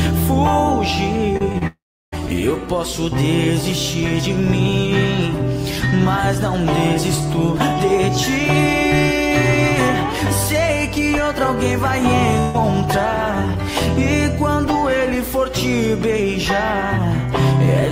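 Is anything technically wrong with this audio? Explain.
Yes, there are three kinds of transmission fault, all clustered around a network delivery problem.

Short concealed packet loss occurs at 1.37 to 1.42 s, 1.52 to 1.56 s and 1.58 to 1.63 s. Each time, about 20 ms of audio failed to reach the decoder. The receiver extended the preceding sound for roughly 20 to 30 ms and blended back, leaving quick smears or wobbles.

A long network dropout follows from 1.67 to 2.14 s. The audio is replaced by a continuation of the last sound that fades away, then about a third of a second of near silence. It resumes with roughly 0.46 s absent, most likely because nothing arrived for that stretch.

A burst of packet loss hits 12.40 to 12.56 s. About 140 ms of consecutive audio was lost or arrived too late. Concealment filled the entire gap with a held, progressively quieter continuation, producing a brief buzz or hiss before the sound picks up further along.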